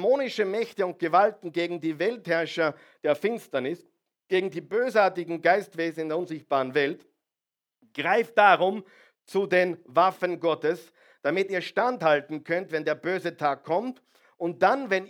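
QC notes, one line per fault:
No faults were heard anywhere in the speech. Nothing in the clip calls for a QC note.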